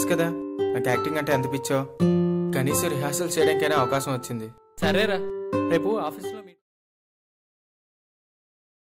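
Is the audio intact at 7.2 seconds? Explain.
Yes, the audio is intact at 7.2 seconds, with no fault at that moment.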